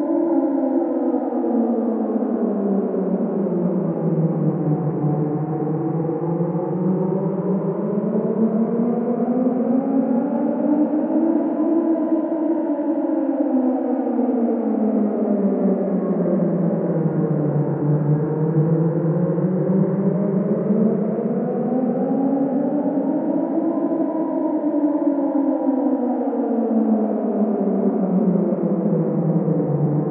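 Nothing here stands out as a technical problem: the sounds carry on without any break, glitch or odd disturbance to point to.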